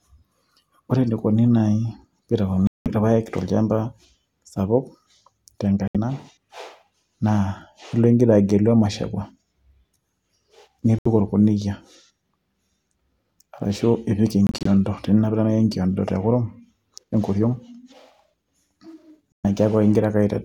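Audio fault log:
2.67 to 2.88, 5.88 to 5.96, 10.99 to 11.07, 14.47 to 14.66 and 19.33 to 19.45 s, Bluetooth dropout: the speech cuts to silence for about 190, 70, 70, 90 and 120 ms. At 14.47 s the silence is split into short gaps across about 0.19 s, the longest about 23 ms. After each gap the speech resumes further on, as if it had kept playing, likely because packets reached the headphones too late and were discarded. Unlike a buffer underrun, nothing stalls or repeats, and no time is lost.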